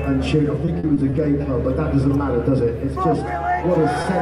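From 0.65 to 1.46 s, repeated packet loss hits the stream: five separate gaps, the longest 40 ms, are patched by extending the preceding sound, covering about 15% of that span. Around 60 ms of real audio never arrives, so the passage turns choppy and robotic.

At 4.02 to 4.06 s, a short stall from a late packet empties the jitter buffer. The receiver holds the last sound for 20 ms, adding 20 ms of delay, then resumes where it left off. Nothing is lost, but that moment lingers with a slight buzz or dip.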